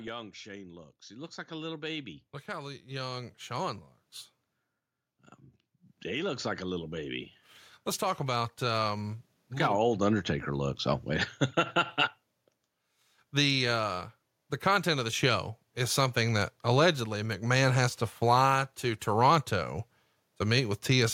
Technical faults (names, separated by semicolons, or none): automatic gain rising